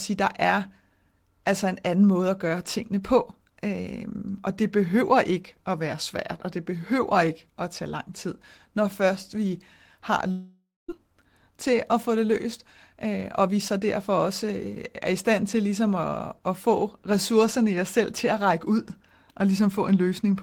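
Right after "når først vi har", from 10.31 to 10.99 s, the last sound is stretched into a fading buzz lasting about 570 ms, then about 220 ms of silence. When speech resumes, roughly 400 ms has been skipped. This is a long network dropout, likely caused by packets that never arrived. Unlike a brief packet loss, the concealment runs out and the audio jumps ahead rather than continuing where it stopped.

A jitter buffer speed-up follows, draining the delay that built up around the gap. From 11.51 to 12.46 s the speech runs at 104% speed, losing around 40 ms. From 12.95 to 14.66 s, ending just before "er i stand til", it runs at 107%, losing around 100 ms. Pitch-period-sized pieces are cut out repeatedly, so the speech keeps its pitch and sounds hurried in the 107% stretch. This is what separates it from resampling, which would raise the pitch.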